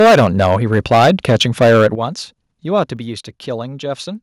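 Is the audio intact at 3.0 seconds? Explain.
No. At 2.97 s the speech and its background drop abruptly by about 5 dB, a microphone volume step-down, likely from call software lowering the input gain in one move.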